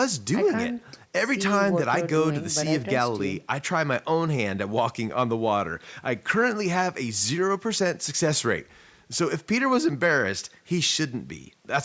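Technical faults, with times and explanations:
No technical faults, with times and explanations, can be given, as none are present; the speech passes through normal call microphone processing with nothing above 8 kHz.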